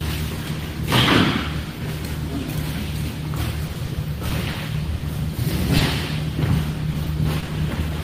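Around 3.67 to 3.71 s there's a short concealed packet loss: about 20 ms never arrived, so the receiver extended the previous sound to cover it, leaving a quick smear. Right after, at 3.73 to 3.77 s and again at 3.85 to 3.89 s, come short stalls from late packets. The jitter buffer ran dry, so the sound hangs on roughly 20 ms too long, with nothing actually lost. Another concealed loss lands at 4.52 to 4.56 s, then another stall at 4.98 to 5.02 s, and a third concealed loss at 5.78 to 5.82 s. Each one is a brief wobble where 20 ms was patched over. From 6.92 to 7.91 s you get repeated packet loss with a robotic sound. A handful of holes of up to 20 ms, about a tenth of that stretch, get patched one after another, so the sound turns choppy.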